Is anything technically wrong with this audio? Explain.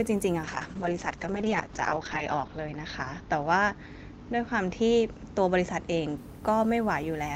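Yes. A call bitrate drop from 0.45 to 6.23 s starved the encoder, fitting a fall to 8 kbps. The speech turns coarse and muffled, capped at 8 kHz.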